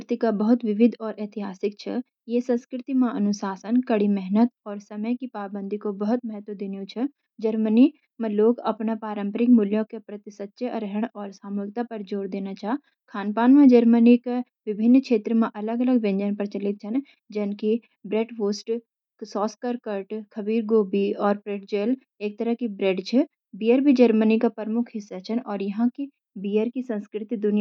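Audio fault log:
No faults heard anywhere in this speech recording.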